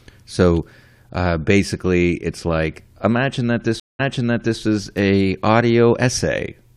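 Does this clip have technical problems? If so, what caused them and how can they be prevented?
Yes. At 3.80 to 4.60 s there is a stream reconnect. The connection dropped just after "it's like imagine that", and the player rejoined with a fresh decoder. You hear about 0.19 s of silence, then a faded-in restart that replays audio from 0.6 s earlier before "is a". This can be prevented with a deeper network buffer and reconnect logic that resumes at the exact stream position and discards any resent audio.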